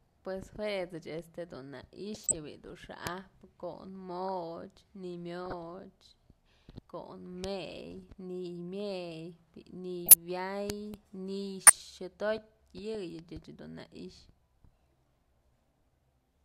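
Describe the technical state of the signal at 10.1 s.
At 10.1 s there's a corrupt frame decoded, running from about 10.06 to 10.14 s. Damaged bits in the compressed data got played anyway, scattering energy to the wrong frequencies. It comes through as a chirp, squeak, blip or burst of noise peaking around -5 dBFS, and its length fits roughly five frames.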